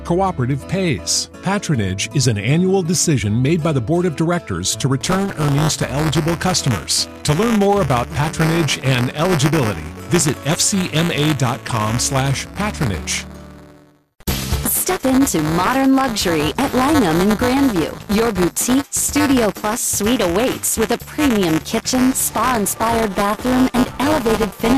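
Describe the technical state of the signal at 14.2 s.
Buffer tearing runs from 5.01 s to the end: writer and reader cross each period, splicing in a small slice of audio about 15 ms stale, producing a rattling 200 Hz buzz.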